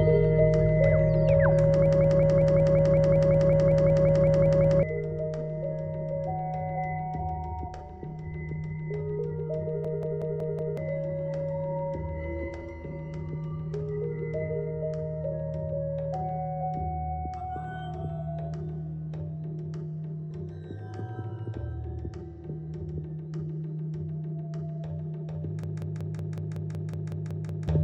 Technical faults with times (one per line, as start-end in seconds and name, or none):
1.86-4.83 system hang loop
9.85-10.77 system hang loop
25.63-27.68 system hang loop